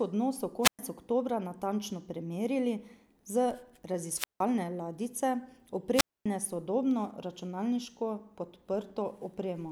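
Hiss swells briefly and the speech drops into near silence at 0.62–0.79 s, 4.12–4.43 s and 5.94–6.26 s, with mutes of about 0.11, 0.17 and 0.25 s. These are wireless microphone squelch dropouts: the FM signal faded and the receiver's squelch gated the output shut.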